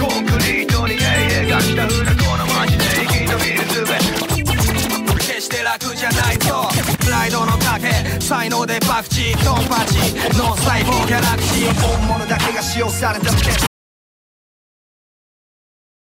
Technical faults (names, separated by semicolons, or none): audio dropout to silence